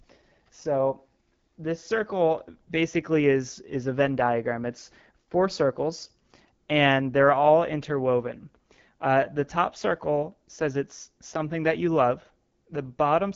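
AMR wideband (HD Voice) codec damage runs through this whole speech clip. The rough, raspy texture points to one of the codec's lowest rates, likely around 8.85 kbit/s. Nothing is heard above 6.9 kHz, and the top band above 6.4 kHz is noise-filled rather than coded detail.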